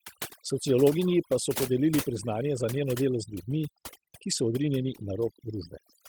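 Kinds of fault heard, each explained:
overdone noise removal: Aggressive noise reduction mutes bands near its noise estimate, leaving near-silent background with twinkling specks throughout, not a steady uniform dulling.
lost packet rebuilt from error correction: At 4.31–4.37 s, about 40 ms rebuilt from low-bitrate copies sounds briefly rougher and noisier, with no silent gap or repeated fragment.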